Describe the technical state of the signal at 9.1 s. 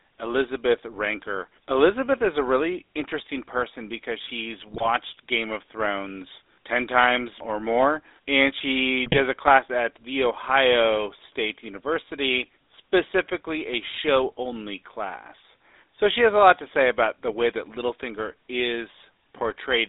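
At 9.1 s the signal carries GSM bit errors from 9.06 to 9.19 s. Corrupted filter, pitch and gain values garble the decoder's output, giving squawks and gargling pops. On a waveform, level spikes appear; a spectrogram shows smeared, distorted bands, which fits roughly four damaged frames.

Underneath lies the GSM full-rate codec, present throughout. Its pulse-driven vocal-tract model gives the speech a buzzy, gravelly roughness, plainly audible, at a sound consistent with 13 kbps. A spectrogram shows the band confined to about 300 Hz–3.7 kHz, empty above.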